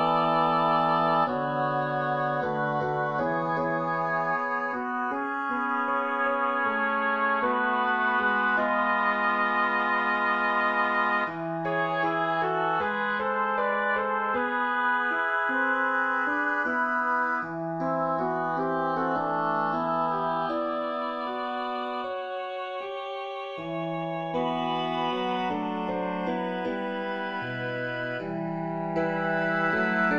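Throughout the clip the two channels drift apart. They behave as if captured on separately clocked devices, with a mismatch of roughly 20 ppm, so the inter-channel delay grows steadily from nothing to around half a millisecond by the end. Summed to mono, this creates comb-filter notches that slide slowly down through the spectrum, the lowest settling near 1 kHz. The result is a gradual, slow flanging sweep across the sound.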